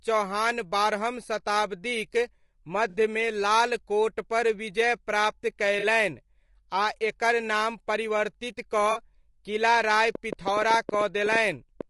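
Throughout the speech there is a rough, grainy texture, with hiss sitting between the harmonics of the voice and an upper band that sounds thin and somewhat synthetic. That is the signature of low-delay AAC compression, likely AAC-ELD run at a bitrate around 32 kbps. Its short frames cannot separate closely spaced pitch harmonics well, and at this bitrate the encoder fills the gaps with noise and rebuilds the highs coarsely.

At 2.89 s, 5.79 s (right after "कोटपर विजय प्राप्त") and 8.91 s there are brief smeared, phasey patches, each about 40 ms long, where the sound turns noisy and loses its definition. These are AAC frame loss with concealment. Each gap fits two lost frames, which the decoder covered by repeating and scrambling the last good spectrum. The gaps are short enough that the sound carries on rather than dropping to silence.

From 10.15 s to 11.82 s a train of clicks ticks over the speech and the pauses alike, about fifteen sharp, similar pops at roughly 7.9 per second on an uneven beat, peaking around 10 dB above the speech. 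Pulses of the same shape repeating several times a second like this most likely come from interference or a faulty connection or power supply, not from anything in the recording itself.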